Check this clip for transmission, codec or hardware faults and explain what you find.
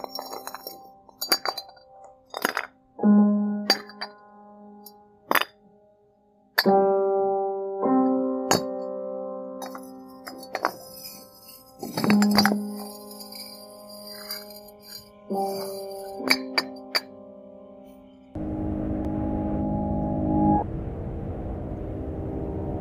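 One fault turns up: a single sharp tick at 19.05 s. It is a block of digital silence, a gap of about 0.73 ms (which fits a 32-sample block), likely where the output was not filled in time, and dropped to zero with no fade.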